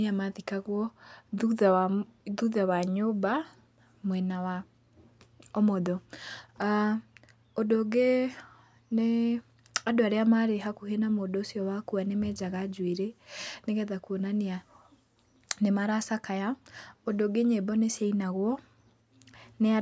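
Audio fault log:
Nothing to log here: the speech comes through with no audible faults anywhere.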